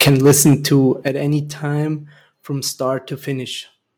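From the start to 0.77 s the speech shows microphone overload, likely from an input volume set about 12 dB too high, so peaks slam into the converter's ceiling. Roughly 7 percent of samples are flattened, giving the loudest syllables a harsh, crackling edge. The microphone volume was stepped down twice, likely by the call software reacting to that clipping: at 0.09 s the level drops by about 4 dB, and at 1.08 s, just before "any time from", it falls about 8 dB more. Each time voice and background shrink together in one sudden step.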